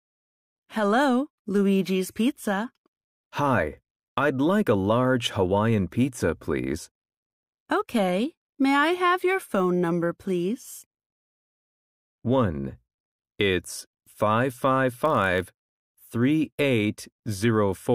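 From 14.89 s to 15.85 s the speech picks up a block size mismatch (padded): one stage delivers shorter blocks than the next expects, and the shortfall in each is filled with silence. The result is a steady buzz at about 43.1 Hz, which fits a 1024-sample read size, while pitch and pace stay essentially unchanged. On a waveform, brief flat gaps recur at regular intervals; a spectrogram shows evenly spaced vertical stripes.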